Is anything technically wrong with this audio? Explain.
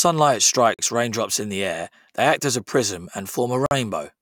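Yes. The speech has two gaps at joins of encoded pieces, at 0.74 to 0.79 s (about 45 ms), just before "raindrops in the air", and at 3.66 to 3.71 s (about 49 ms), right after "act as a prism". Separately encoded segments were butted together untrimmed, so encoder start-up delay and final-frame padding remain as short dropouts. On a waveform each is a flat notch with smeared edges. A spectrogram shows a thin vertical blank band before the speech resumes where it left off.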